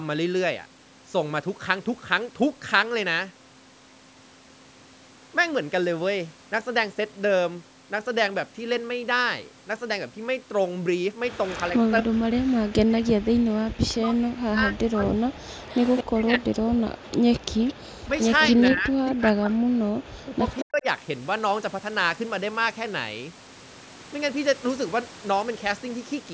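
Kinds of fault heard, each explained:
Echo leak: a faint copy of the speech trails about 0.2 s behind, roughly 10 to 20 dB down, likely loudspeaker sound the echo canceller missed.
Speech suppressed in double talk: the talker's speech drops away in pieces, by around 40 dB, likely the echo canceller turning everything down while both sides overlap.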